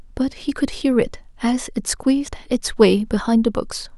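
Listening to the speech recording, nothing stood out as a technical problem.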